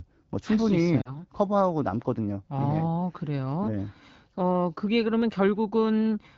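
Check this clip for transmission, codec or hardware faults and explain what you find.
One fault is audible. From 1.02 to 1.21 s the speech dips, then returns rough: lost AMR speech frames, about 40 ms, concealed by repeating earlier settings at falling gain.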